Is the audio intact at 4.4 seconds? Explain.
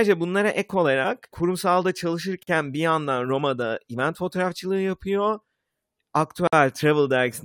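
Yes, at 4.4 seconds the speech plays through intact, with no dropout, click, distortion or other audible fault at that moment.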